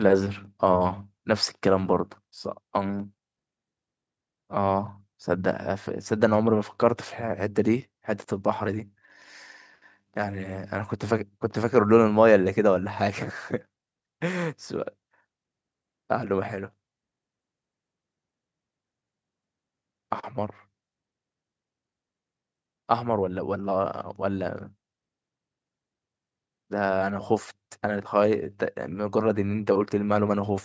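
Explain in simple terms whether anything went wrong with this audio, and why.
Nothing went wrong: the speech passed through ordinary call microphone processing, which trims the deepest bass and leaves nothing above 8 kHz, and that is expected behaviour, not a fault.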